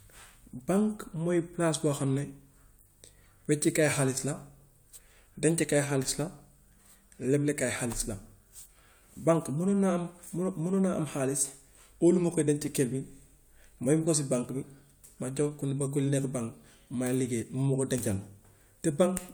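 Listening to the speech recording, nothing technical stood out.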